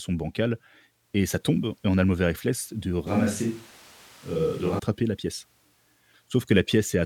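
From 3.07 to 4.79 s the speech turns abruptly roomy and hollow, thinner in the bass, with background noise rising to about 25 dB below the voice, though loudness stays roughly level. This is likely a switch to a distant microphone, changing back just as suddenly.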